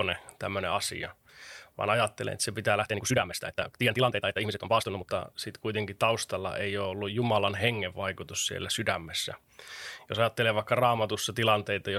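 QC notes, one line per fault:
2.79–5.09 s, time-stretched section: after "ajattelen että se pitää", the pace jumps 1.87 times faster at unchanged pitch and sounds rushed, likely from software dropping short pieces. The spectrogram shows crowded syllables with unchanged harmonic spacing.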